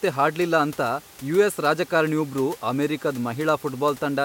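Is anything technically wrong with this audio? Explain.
No, nothing technical is wrong with this speech recording.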